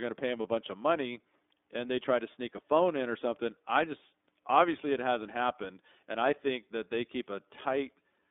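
Throughout, the speech carries the iLBC codec's sound. The band is held to roughly 250 Hz to 3.6 kHz, so the voice is thin and lacks air. Each frame's excitation is coded on its own, which gives a plainly audible rough, slightly synthetic edge, and the pacing of that roughness fits 30 ms frames in the 13.33 kbps mode. Unlike a wideband codec's smearing, nothing above 3.6 kHz survives at all.

From 0.42 to 0.46 s, between "to pay them" and "bunch of money and", there are lost iLBC frames. The gap matches a single 30 ms frame going missing. The decoder covers it by repeating the last pitch cycle with added noise, which sounds like a brief held, faintly buzzy vowel rather than silence or a click. Because each iLBC frame decodes independently, the voice snaps back immediately afterward with no lingering smear.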